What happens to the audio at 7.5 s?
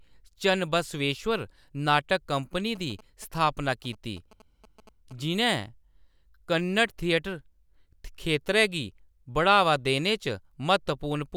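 Nothing goes wrong at 7.5 s; the speech there plays through intact, with no dropout, click, distortion or other fault.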